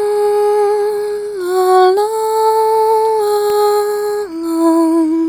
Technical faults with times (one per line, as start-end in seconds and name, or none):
3.50 electrical switching spike